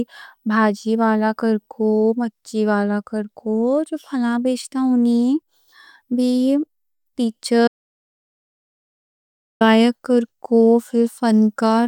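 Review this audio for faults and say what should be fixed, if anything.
Audio dropout to silence from 7.68 s to 9.61 s: the speech cuts off mid-flow and about 1.93 s becomes silence, with no room tone, before resuming abruptly. The input was likely lost, through a disconnected device, failed link or stray mute, while the recorder kept writing silence, so that stretch of speech is gone. To prevent it, secure connections and mute controls and monitor input levels live so any loss is caught and retaken.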